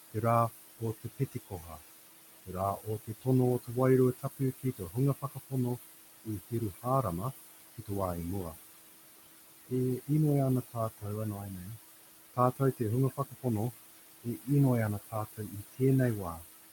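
Noise suppressor artifacts run through the whole clip. A suppressor is pulling down whatever it judges to be steady background, band by band and frame by frame, by about 19 dB. The room noise, which sits only about 11 dB under the speech, therefore drops away in the gaps and swells back beneath each phrase.

Speech cut by the noise suppressor occurs from 0.12 to 8.56 s and again from 9.69 s to the end at 16.72 s. In these stretches the suppressor mistakes parts of the speech itself for noise. Soft consonants, word endings and quieter syllables are pushed down with the background, by as much as about 21 dB in the first span and about 20 dB in the second. Across the first span around two seconds in all is affected, leaving those sounds swallowed and faint.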